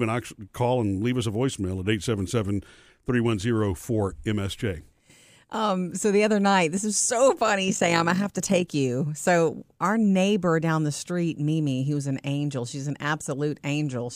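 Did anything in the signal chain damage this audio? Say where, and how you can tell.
Yes. A frame-based processing stage rebuilt the speech from windowed frames whose overlap doesn't sum to constant gain, causing overlap-add ripple from 7.68 to 8.75 s. The level pulses about 6 dB once per frame, around 50 times a second, heard as a rough flutter.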